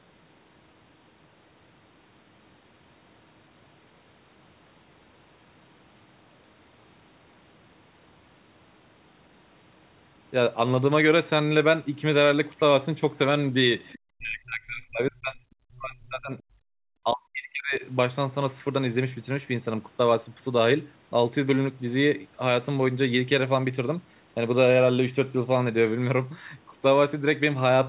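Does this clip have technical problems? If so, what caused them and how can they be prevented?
Yes. From 13.85 to 13.99 s, a faint second voice, the other side's voice leaking through, sits about 25 dB below the speech. The likely cause is an echo canceller leaving residual loudspeaker echo in the microphone signal. On a spectrogram it shows as a brief, weak harmonic pattern that doesn't belong to the talker. Better acoustic isolation between loudspeaker and microphone, or a headset, would prevent it.

The speech is suppressed in double talk at 14.01–15.43, 15.65–16.41, 16.71–16.81 and 17.04–17.83 s, falling by as much as roughly 40 dB. This is likely the echo canceller attenuating everything while both sides talked at once. The waveform shows sudden envelope collapses, and the spectrogram shows blank or thinned gaps. A canceller with stronger double-talk detection, or a headset, would prevent this.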